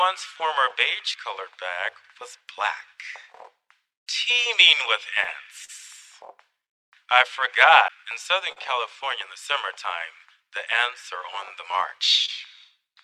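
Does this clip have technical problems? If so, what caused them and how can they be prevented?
Yes. The sender's audio clock runs roughly 2% slower than the receiver's. This is clock drift between sender and receiver: the jitter buffer keeps draining, so the receiver must pad the stream all the way through, and small timing hiccups recur at uneven intervals. Locking both ends to a common clock reference, or using adaptive resampling at the receiver, would prevent this.

To keep up with the slow sender, the receiver makes repeated timing corrections from 0.32 to 7.4 s and again from 9.53 to 12.86 s. It repeats short pieces, so the sound plays at about 98% speed. Roughly 150 ms is added in the first stretch and about 70 ms in the second. Smooth resampling instead of repeating pieces would hide these corrections.

A short stall from a late packet occurs three times. Each time a packet misses its deadline, the buffer runs empty, and the last sound is stretched until the packet arrives. 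The stretch is 38 ms at 5.65 s, 42 ms at 8.52 s and 25 ms at 12.26 s. Nothing is lost, but each spot is held slightly too long, with a small buzz or dip. A somewhat deeper jitter buffer would absorb these late arrivals.

At 7.88 s there is a CD skip. The laser jumps to another turn of the disc's spiral, and the player mutes for about 10 ms. The result is a tick followed by an abrupt jump to a different place in the sound. A clean, undamaged disc and a player protected from knocks would prevent it.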